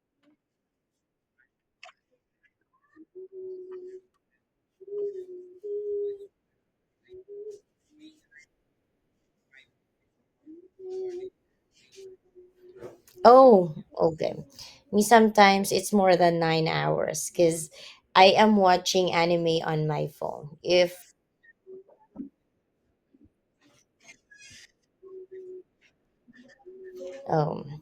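Compressed frames skipped at 14.41 to 14.44 s and 17.83 s, after "than nine hours because": roughly two 20 ms frames drop out, so speech lurches ahead.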